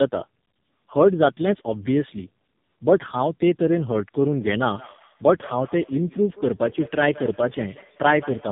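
From the first moment to the end, the speech has that rough, muffled, warbly quality of tandem speech coding. It sounds like two low-rate speech coders stacked, which fits a G.723.1 leg at 6.3 kbit/s and, after a G.711 A-law leg at 64 kbit/s, an AMR-NB leg at 7.95 kbit/s. The second coder is re-squeezing audio the first already mangled, so the artefacts compound. There's also nothing above about 3.7 kHz, giving it that boxy narrowband phone sound.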